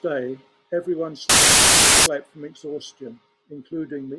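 At 1.29 s the speech is replaced by very loud white noise until 2.06 s. This is file tags played as audio: an embedded cover picture's compressed bytes were read as samples. Unlike a decoder glitch, the static is steady, with hard edges at both ends.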